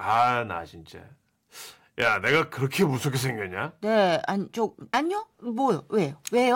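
At 4.93 s the speech jumps abruptly forward, with a brief blip at the join and no gradual transition. The most likely cause is a stream segment skipped: one chunk of the segmented stream failed to arrive or decode, and the player continued with the following segment. That would drop a portion of the programme, which is why the sound leaps ahead instead of pausing and resuming where it stopped.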